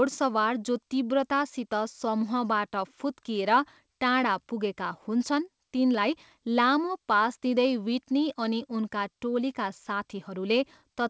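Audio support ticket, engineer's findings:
No faults found in this recording.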